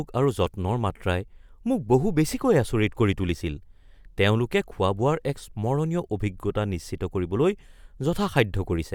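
Nothing in this bit of speech stands out as a technical fault; it simply runs along without any problem worth pointing to.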